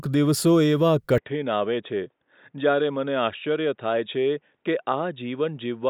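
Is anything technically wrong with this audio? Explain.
Yes. An input switched to a poorer device at 1.18 s, likely. It passes nothing above 3.8 kHz, so the speech turns dull and slightly quieter, with faint new background noise.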